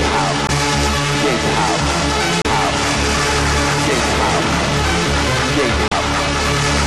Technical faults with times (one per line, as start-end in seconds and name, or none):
0.46-0.50 damaged data in a compressed stream
2.42-2.46 damaged data in a compressed stream
5.87-5.92 damaged data in a compressed stream